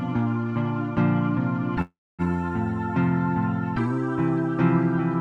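From 1.81 to 2.22 s there is a call audio freeze: the sound stalls into a fading buzz or hiss, then about 260 ms of silence, before resuming intact but roughly 370 ms late. It is likely a jitter buffer running dry. A spectrogram shows a smeared, decaying band, then a blank gap.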